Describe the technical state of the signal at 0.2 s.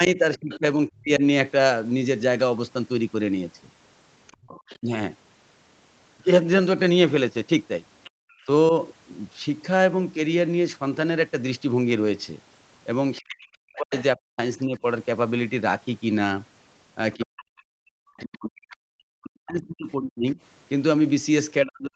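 The echo canceller likely confused the talker with loudspeaker echo while both sides spoke, so speech is suppressed in double talk from 0.16 to 1.22 s. The speech dips and cuts out in pieces for about half a second in total, falling by roughly 40 dB at worst.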